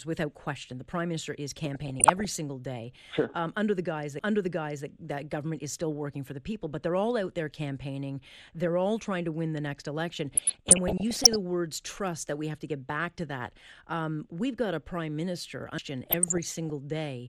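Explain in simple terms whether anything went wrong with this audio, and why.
The speech sounds dull and gurgly all the way through. That is likely MP2 compression, which saved space by discarding detail and high tones.

DAB burbling appears at 1.73 to 2.36 s, 10.35 to 11.36 s and 16.10 to 16.70 s. Reception errors slipped into the data, making short blips of noise.

A CD skip happens at 4.19 s and 15.78 s. Each time the sound cuts out very briefly and then carries on from a different point.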